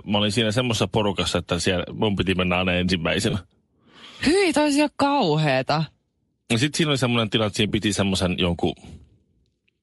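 Bluetooth LC3 compression runs throughout this speech recording: the voice has a breathy, grainy edge, with the upper spectrum thinned out and replaced by noise-like fill. It is likely LC3 coding from a Bluetooth LE Audio link, where the coarse upper bands are reconstructed as noise, and the plainly audible damage fits a rate around 48 kbps with 10 ms frames. Lost LE Audio frames occur at 3.30 s, right after "mun piti mennä aina", and at 7.69 s, after "semmoinen tilanne että siinä" and before "piti semmoisen jonkun". Each is a brief smeared, noisy patch. The first spans about 30 ms, which fits three missing 10 ms frames, and the second about 20 ms, which fits two. The decoder filled each gap by repeating the last good spectrum with scrambled signs, so the voice's tone briefly dissolves into noise.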